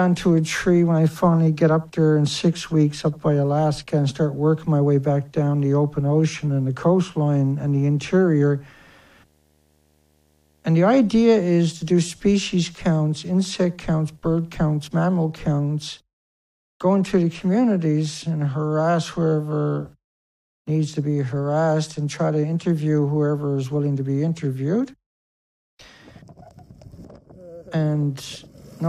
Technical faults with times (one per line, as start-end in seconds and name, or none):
0.00-15.26 video or display buzz